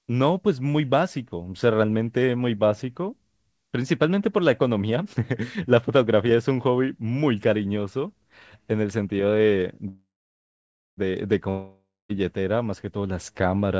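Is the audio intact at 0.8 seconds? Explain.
Yes, the speech at 0.8 seconds is intact, with nothing above 8 kHz as expected from a normally working WebRTC call path whose coding fits G.722.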